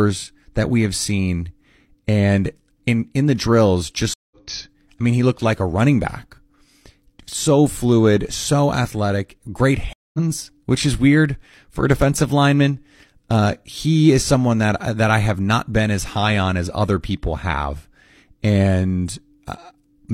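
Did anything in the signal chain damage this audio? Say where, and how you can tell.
Yes, two stream reconnects at the network stage: after "in in the drills" (4.14–4.47 s, 0.17 s silent) and after "fluid so athletic great" (9.93–10.19 s, 0.21 s silent). Each resumes about a fifth of a second further on, with a fresh decoder easing in. Unlike a dropout, the speech skips ahead.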